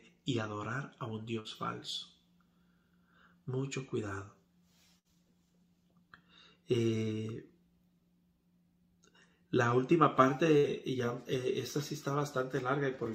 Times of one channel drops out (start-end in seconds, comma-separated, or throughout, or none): none